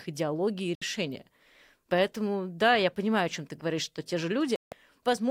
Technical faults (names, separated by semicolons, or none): digital broadcast dropout